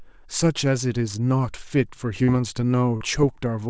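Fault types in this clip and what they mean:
Short concealed packet loss: twice, at 2.24 s and 2.97 s, about 40 ms of the stream failed to reach the decoder in time. The receiver filled each hole by extending the preceding sound, continuing its pitch or its noise shape, then crossfaded back into the real signal. Each repair is heard as a brief smear or wobble of about 40 ms, set in call audio that stops at 8 kHz, which fits a wideband codec such as G.722.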